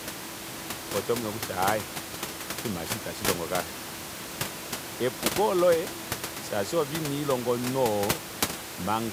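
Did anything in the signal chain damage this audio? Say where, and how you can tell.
No, nothing in the chain has damaged this speech; the only thing under it is the room's own background noise, sitting about 12 dB below the talker, which belongs to the recording rather than to any stage after the microphone.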